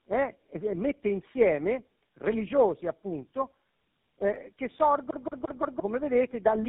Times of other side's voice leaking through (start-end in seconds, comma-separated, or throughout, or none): none